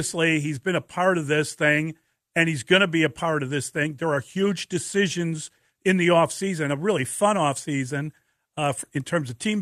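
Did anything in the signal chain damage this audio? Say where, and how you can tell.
No, nothing stood out on listening that would point to damage anywhere in the signal chain.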